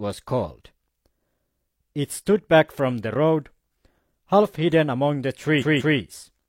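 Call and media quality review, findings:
Repeated frames, 5.58 to 5.95 s: stutter near the end of the speech. The same 0.19 s block plays twice more, adding about 0.37 s. Fits a short run of compressed frames resent or rewritten upstream of the decoder. Waveform shows identical envelope copies back to back. Spectrogram shows repeating tiles.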